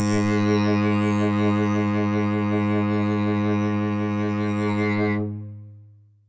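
The music carries no technical faults, having passed through a call's microphone processing that is working as intended, with the lowest bass trimmed and nothing above 8 kHz.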